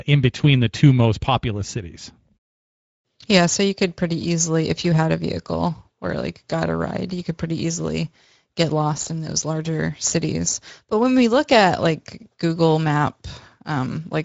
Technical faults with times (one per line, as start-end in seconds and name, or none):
0.00-14.24 Speex codec